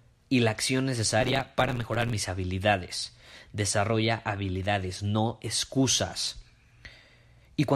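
From 1.20 to 2.13 s, a block size mismatch (truncated) occurs: one stage hands over longer blocks than the next one reads, which fits 512-sample writes, and each block's tail is discarded. The speech gains a 100 Hz buzz and runs about 1.16 times fast with its timbre intact.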